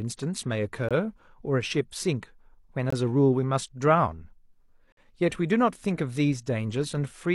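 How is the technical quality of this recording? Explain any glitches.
The speech is broken by three short, hard-edged silences at regular spacing. These are gaps between stream segments: at 0.89–0.91 s and 2.90–2.93 s (21 ms each) and 4.92–4.97 s (about 51 ms). Segments two seconds long were joined with timestamps that left small holes, which the player filled with silence. Nothing is lost, but each gap cuts the sound off abruptly.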